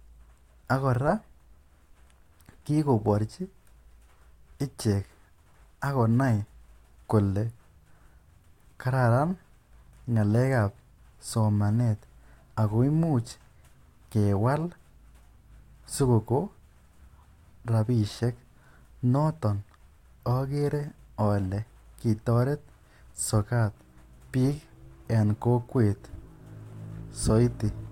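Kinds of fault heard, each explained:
No technical fault can be heard anywhere in the recording. There are no dropouts, clicks, distortion or sudden level changes to point to.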